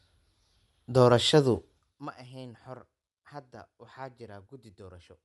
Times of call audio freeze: none

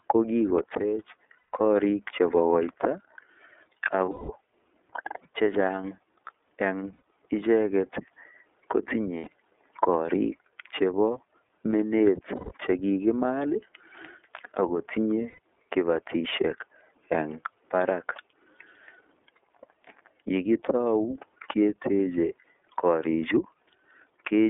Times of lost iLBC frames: 1.38-1.53, 4.05-4.30, 6.93-7.01, 9.18-9.28, 12.35-12.52, 15.30-15.39

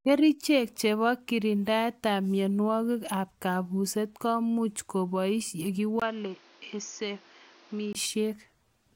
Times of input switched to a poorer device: 6.00-7.95

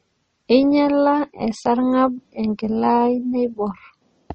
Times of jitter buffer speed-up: none

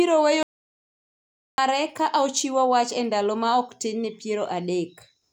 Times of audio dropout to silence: 0.43-1.58

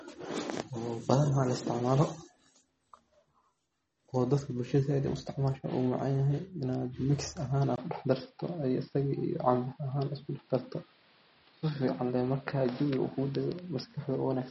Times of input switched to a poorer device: 7.76-14.51

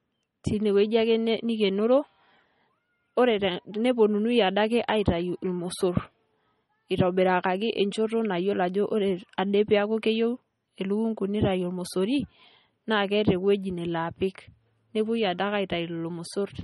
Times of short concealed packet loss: none

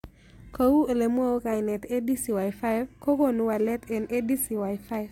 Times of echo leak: none

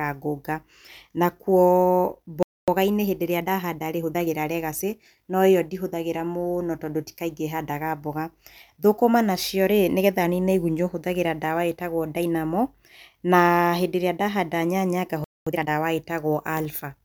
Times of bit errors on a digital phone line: none

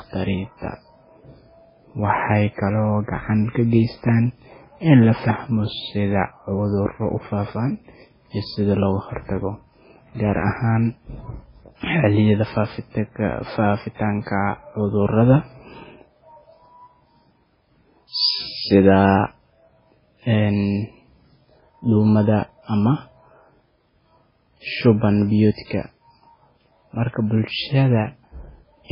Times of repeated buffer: none

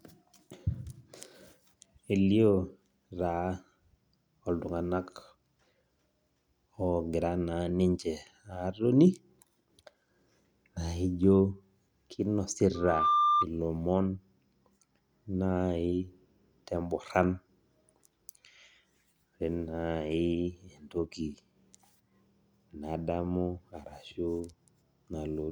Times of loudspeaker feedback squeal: 12.74-13.47

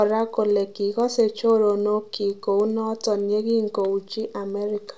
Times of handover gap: none

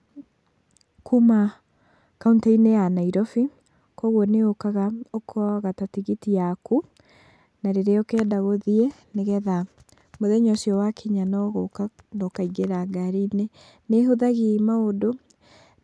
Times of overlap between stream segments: none

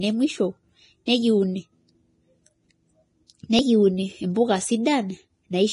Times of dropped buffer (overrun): 0.69, 3.59

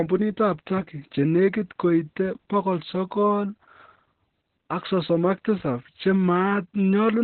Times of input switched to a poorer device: none

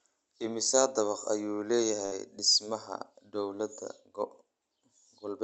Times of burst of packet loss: 2.05-2.13

